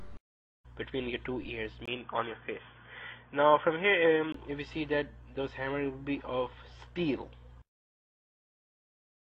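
At 1.86 s there's a 20 ms gap, then the sound goes dull and boxy with nothing above 3.5 kHz, plus new background noise, until 4.34 s. That's likely an input switched to a poorer device.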